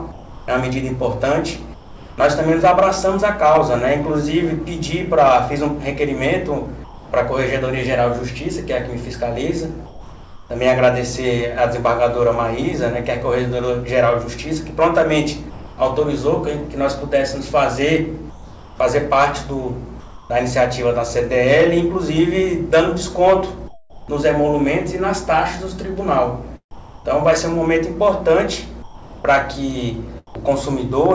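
In the pauses at 0.12–2.18 s, 6.84–7.12 s, 9.86–10.50 s, 15.50–15.78 s, 18.30–20.30 s, 23.68–24.08 s and 26.71–30.50 s, the background, sitting about 19 dB below the loud passages, turns into a flat, textureless hiss. That is comfort noise in place of the background, likely from discontinuous transmission, where the receiver synthesises a rough stand-in for the room. The stand-in is often quieter: about 4, 5, 2 and 12 dB down at 6.84, 9.86, 15.50 and 23.68 s. Like the rest of the clip, it has nothing above 8 kHz.

At 26.71–27.05 s, about 120 ms of actual sound disappears and the same featureless noise takes its place until the sound resumes. This is sound dropped by the voice detector, likely because the detector mistook a quiet stretch for background. It differs from the gaps above because content is lost here, not just background detail.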